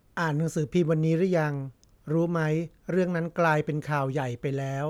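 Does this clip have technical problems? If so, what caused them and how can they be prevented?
No, this clip does not have technical problems, so there is nothing here that needs preventing.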